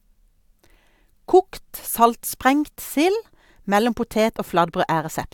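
No technical faults can be heard anywhere in this speech recording. Nothing in the audio calls for comment.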